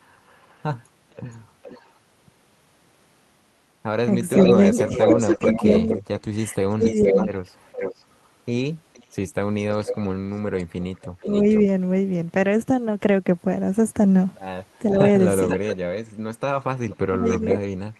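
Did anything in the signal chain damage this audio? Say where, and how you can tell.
Yes. Four kinds of damage can be heard, all from call processing and the network.

Echo leak runs through four stretches: 0.12 to 1.89 s, 4.34 to 11.61 s, 14.90 to 15.76 s and 16.89 to 17.99 s. A delayed copy of the sound trails the original by about 0.46 to 0.48 s. It is faint at first, about 25 dB down, then much stronger, about 5 to 10 dB below the direct sound. The likely cause is a far-end loudspeaker whose echo canceller let its own microphone pickup return down the line.

Speech suppressed in double talk appears from 4.35 to 7.32 s and from 17.08 to 17.81 s. Both spans fall inside echo stretches, where two signals overlap. The voice on the loudspeaker side dips, by about 25 dB in the first span and about 30 dB in the second. The damage adds up to about 0.7 s and about half a second. The likely cause is an echo canceller that could not separate talker from echo and turned both down.

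A lost packet rebuilt from error correction shows at 5.29 to 5.35 s. There is no gap. Instead, about 40 ms turns rougher and noisier than the sound around it, which fits two 20 ms packets. That is network loss. The decoder covered it with the low-bitrate backup copies that Opus carries in the following packets.

Short concealed packet loss follows at 5.37 to 5.41 s. About 20 ms never arrived in time. The receiver extended the preceding sound for about 14 ms, then blended back into the real signal. The result is a brief smear or wobble right after the rebuilt section. This is a network fault hidden by the decoder's concealment.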